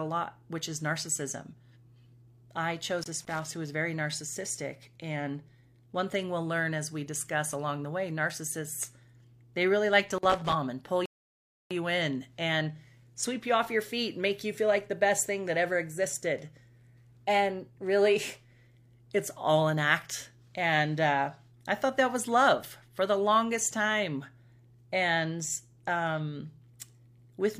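From 2.99 to 3.52 s, just before "who was very narcissistic," loose connector crackle breaks through. A worn contact chops the speech into scratchy bursts. It returns from 10.12 to 10.53 s, between "they really like" and "and pull you in." At 11.06 s, after "and pull," a rebuffering stall drops to silence. The player ran dry. Speech resumes at 11.71 s with "you in and sweep," adding 0.65 s.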